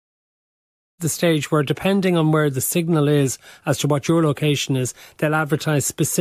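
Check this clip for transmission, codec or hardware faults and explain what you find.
No faults found in the speech: the only level change is a smooth fade-in around 1 s, completed by 1.01 s, an ordinary edit with no click or hard edge.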